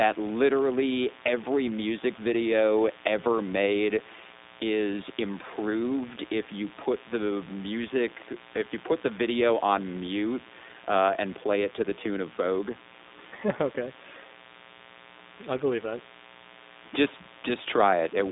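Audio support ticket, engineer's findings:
Mains buzz throughout, roughly 25 dB under the speech. Raspy 60 Hz hum from dimmer/rectifier spikes or poor shielding. Spectrogram shows a harmonic comb from 60 Hz to several kHz.

iLBC codec damage throughout, plainly audible as rough, synthetic speech. Narrowband line passes 250 Hz to 3.7 kHz, nothing above 3.8 kHz. Spectrogram shows a hard ceiling. Grain fits 20 ms frames at 15.2 kbps.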